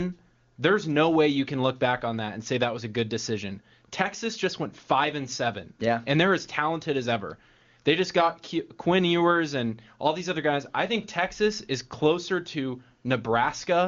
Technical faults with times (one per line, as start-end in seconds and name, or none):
none